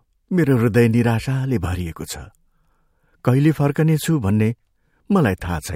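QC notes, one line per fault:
No faults found on the speech track; nothing to log.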